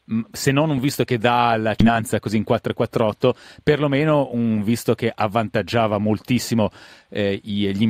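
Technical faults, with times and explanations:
1.80 s, skip ahead: After "visto che dà la", roughly a third of a second of audio was dropped while later audio was already queued, and playback jumped straight to the newer material. The speech lurches forward, with the two sides of the cut joined almost seamlessly.
1.89 to 3.08 s, jitter buffer speed-up: Still holding more audio than its target, the jitter buffer trimmed short pitch-period slices again and again, removing about a tenth of a second in total. The speech runs at 107% speed with unchanged pitch and sounds slightly hurried until "perlomeno un visto che".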